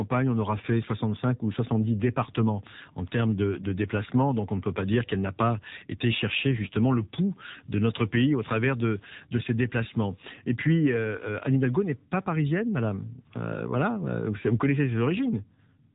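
From the start, the whole clip runs through an AMR narrowband mobile codec. Nothing gets past about 3.8 kHz, and the speech has that buzzy, synthetic edge. The damage is plainly audible, which fits one of the lower AMR-NB modes, around 7.4 kbps.

Between 4.68 and 10.18 s, pre-emphasis is left on. The treble boost was applied without the matching cut, following something like the FM 75 µs curve. That puts the top end about 13 dB above 1 kHz, so the voice turns thin, bright and hissy on sibilants.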